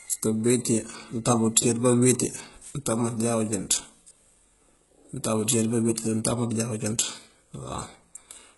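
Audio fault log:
Throughout: HE-AAC compression, likely. The treble above the lower band is rebuilt from copied lower bands, so its harmonics do not line up and s sounds turn gritty and lispy. Nothing is heard above about 11.5 kHz. The heavy damage fits a very low bitrate, near 12 kbps.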